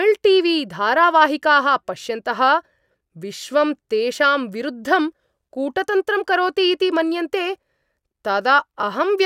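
No technical faults can be heard anywhere in the recording.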